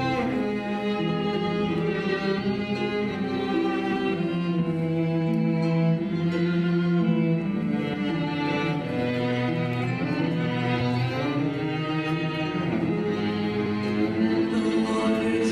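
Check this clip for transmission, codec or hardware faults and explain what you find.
There are two spots where compressed frames were skipped. At 10.8 s the audio jumps ahead by roughly 200 ms, which fits about ten 23.2 ms frames going missing or being rejected by the decoder. At 13.66 s it jumps roughly 50 ms, a couple of frames' worth. Each one is heard as a brief glitch at the join where the sound lurches forward.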